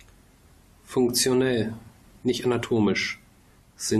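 At 0.92 s the speech drops for about 1.45 ms into a block of digital silence. The sound cuts out and returns with no fade, and the short gap is heard as a single tick. The length fits a 64-sample buffer that was not filled in time. At 2.45 s a second block, about 2.47 ms long, gives a similar tick.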